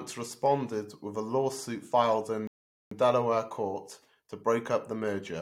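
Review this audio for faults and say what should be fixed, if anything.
A rebuffering stall interrupts the speech at 2.47 s, just after "with a lawsuit filed". The audio drops to silence until 2.92 s, then picks up exactly where it left off. No speech is lost. About 440 ms is simply inserted. The player ran out of downloaded audio and had to wait for more data before continuing. To prevent it, buffer more audio ahead of playback or use a bitrate the connection can sustain.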